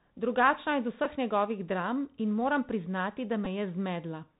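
Bluetooth CVSD headset codec runs through the whole speech clip: the narrowband one-bit delta coding, consistent with a 64 kbps link, passes nothing above 4 kHz, so s sounds turn scratchy, loud bright sounds outrun the adaptive step and distort, and a granular hiss sits underneath.

A Bluetooth headset packet repeated at 1.04 s, just before "njegovih dram in moram", and again from 3.45 to 3.47 s, right after "in moram priznati da". Each time about 11 ms of lost audio, which fits three 3.75 ms packets, was filled by replaying the previous packet, giving a brief buzzy tick.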